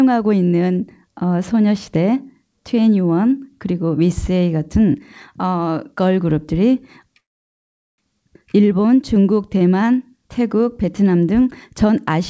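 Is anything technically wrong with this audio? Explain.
Yes. From 7.20 to 8.00 s the audio drops into near-total silence for about 0.8 s, then carries on exactly where it left off, with nothing skipped. This is a call audio freeze. Packets were likely held up in transit, so the jitter buffer ran dry and the receiver filled the wait with almost pure silence. When they arrived, playback resumed intact but about 0.8 s later than before. The band-limited call sound, with nothing above 8 kHz, continues on both sides of the gap.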